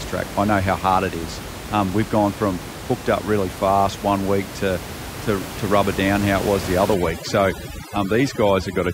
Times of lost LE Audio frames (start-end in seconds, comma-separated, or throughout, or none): none